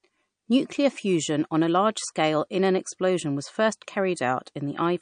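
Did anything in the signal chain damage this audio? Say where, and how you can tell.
Yes. The damage sits at the codec stage and runs through the whole clip. The speech has plainly audible MP3 compression artefacts: nothing survives above 9.6 kHz, and the sibilants take on a watery, swirling texture with metallic chirps. The likely cause is an MP3 encode starved of bits, which fits a low bitrate of around 40 kbps. With too few bits, the encoder lowpassed the treble and zeroed weak frequency lines, which then flicker on and off between frames.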